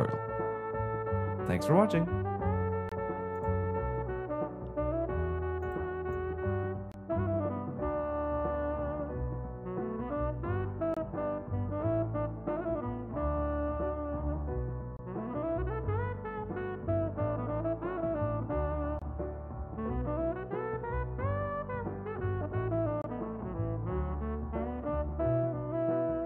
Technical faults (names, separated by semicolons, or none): gap between chunks